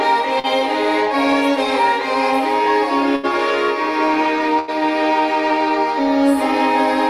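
At 0.39 to 0.47 s there is a short concealed packet loss. About 40 ms of audio never arrived in time. The receiver extended the preceding sound to cover the hole, then blended back. It comes across as a brief smear in the sound.

A burst of packet loss follows at 3.16 to 3.26 s, and another at 4.59 to 4.71 s. Each time, about 80 ms went missing. The receiver stretched the last sound and let it fade out. Playback then jumps ahead, skipping that stretch.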